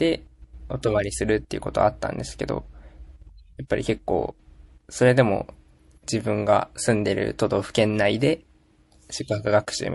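Throughout, the speech has a watery, swirly quality, likely MP3 compression at a low bitrate that fits roughly 48 kbps, zeroing weak frequency content frame by frame. At 3.67 to 3.70 s, pre-echo puts about 15 dB of hiss over 27 ms before an attack, as quantisation noise spreads across a long transform block that fits no switch to short blocks.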